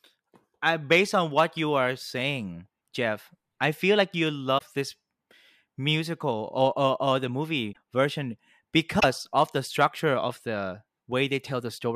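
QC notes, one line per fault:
4.57–4.62 s, broken MP3 bit reservoir, just after "I feel like you": the sound skips ahead with a 44 ms glitch. This is likely lost MP3 frames, 24 ms each. The next frame then decodes borrowed bytes from the wrong data.
7.72–7.77 s, broken MP3 bit reservoir, after "or or or the": a 50 ms jump, likely from the same reservoir break.
8.99–9.04 s, broken MP3 bit reservoir, before "of the structure of": a 52 ms garbled skip, likely the same cause.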